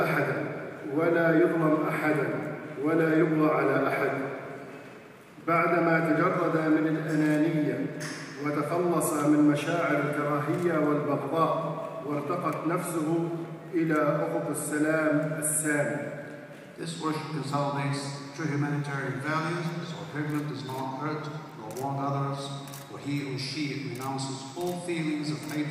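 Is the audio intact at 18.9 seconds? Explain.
Yes, at 18.9 seconds the audio is intact, with no dropout, glitch or other fault to be heard at that point.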